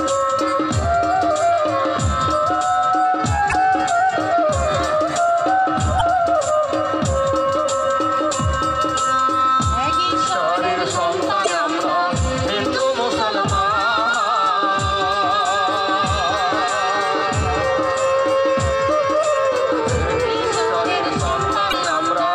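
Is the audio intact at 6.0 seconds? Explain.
No. From 5.97 to 6.02 s, a span of about 44 ms, there is damaged data in the compressed stream. Bytes in that part of the encoded file or stream were lost, zeroed or overwritten, so the decoder could not read the frames there correctly. It lost frame sync and had to search for the next valid header before decoding resumed. The result is a short, harsh blip or squawk.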